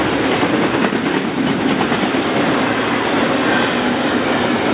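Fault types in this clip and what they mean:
No technical faults are present.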